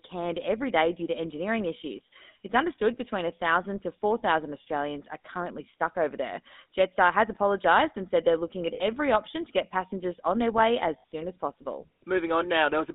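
Throughout the speech, GSM full-rate codec damage is plainly audible. The vocal-tract model driven by sparse pulse excitation gives voices a buzzy, gravelly texture, and the band is confined to roughly 250 Hz to 3.6 kHz, consistent with a 13 kbit/s GSM full-rate stream.

Lost GSM frames occur twice, from 8.74 to 8.83 s, after "said they're looking at", and from 10.98 to 11.04 s, after "passengers on their way". Each gap lasts about 60 ms, which fits three dropped frames. The last good frame's parameters are repeated, producing a brief rough, metallic ring before the sound resumes.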